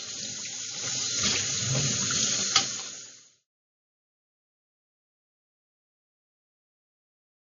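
Right through, nothing survives above 7.2 kHz and there's a smeared MP3 dullness, which is likely low-bitrate audio saved at a high bitrate, fitting a 32 kbit/s original. It stays that dull through the smooth fade-out from about 2 s to 3.48 s.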